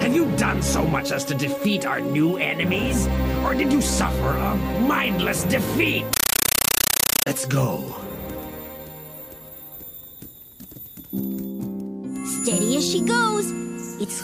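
From 6.13 to 7.27 s you get a compressed stream played as audio. A Dolby Digital (AC-3) bitstream went out undecoded, as if it were plain samples. Each frame becomes a 9.33 ms noise burst plus silent padding, 31.25 times a second, giving loud chattering static.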